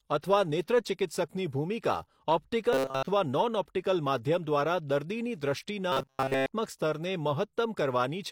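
From 2.73 to 3.07 s and from 5.92 to 6.46 s, the speech turns into a metallic buzz at 134 Hz. This is robotic sound from repeated short buffers. Audio likely arrived too seldom, so a 7.5 ms slice looped. Most of the first span repeats. All of the second does.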